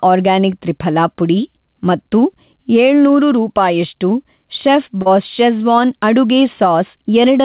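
All the way through, the level breathes, a swing of around 5 dB. That's gain pumping, likely from the input gain being set too hot with a fast limiter or compressor clamping each peak, so everything sounds squashed and evened out.

At 5.02 to 5.07 s there's a short concealed packet loss: about 40 ms of audio never arrived in time, and the receiver papered over roughly 34 ms of it by stretching out the preceding sound before blending back in. You hear it as a quick smear or wobble, sitting inside a band that stops at 4 kHz, as you'd expect from a G.711 call.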